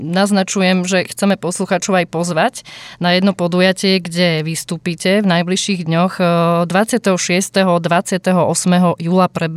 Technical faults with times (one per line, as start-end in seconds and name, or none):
none